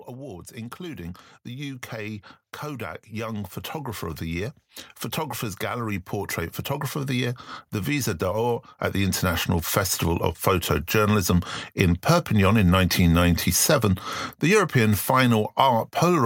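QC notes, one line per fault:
0.07 to 4.68 s, automatic gain rising: the AGC decided the speech was too quiet and eased its gain up about 8 dB, so voice and room noise swell together.
5.59 to 12.09 s, automatic gain rising: same thing again, a slower climb of about 9 dB over six-odd seconds, lifting the background right along with the speech.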